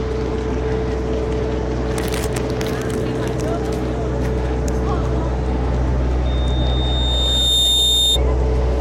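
At 6.25 s a loudspeaker feedback squeal begins. A single tone near 3.6 kHz appears and swells steadily, taking about a second and a half to reach full strength. A microphone was picking up the loudspeaker it fed. At that frequency the loop gain went above one, so the tone fed itself and kept growing. It ends up a few decibels louder than the sound around it. The squeal stops at 8.19 s, when the loop is broken.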